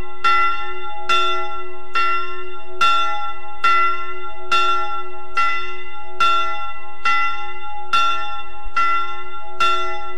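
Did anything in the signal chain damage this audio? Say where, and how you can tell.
Yes: a DC offset of about -16 dBFS, likely from the converter or analogue input stage, shifts the whole waveform off zero throughout, wasting headroom and adding steady sub-audible energy.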